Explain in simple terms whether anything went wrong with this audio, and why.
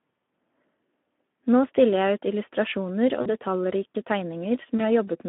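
Yes, two things went wrong. All through the speech, the voice sounds thin, hoarse and plainly grainy, with the highs cut off above about 3.5 kHz, like an old phone line. That is Speex codec damage: this older chat codec squeezed the voice into too little data.

At 3.21 to 3.34 s, right after "stiller jeg ut illustrasjoner", and again at 4.77 to 4.81 s, the voice briefly smears into a stretched, fading blur. This is VoIP packet loss concealed by the speech codec: 40 ms and then 20 ms of audio went missing, and the decoder guessed to fill the gaps.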